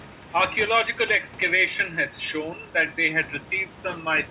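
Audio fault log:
No faults are present: the speech sits about 18 dB above the room's background noise, and its band stops at 4 kHz, which fits a G.711 A-law call path at 64 kbps.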